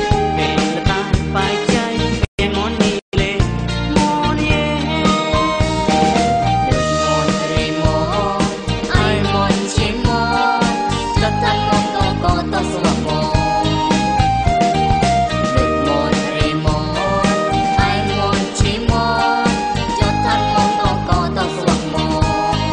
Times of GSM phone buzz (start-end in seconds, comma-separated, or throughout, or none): none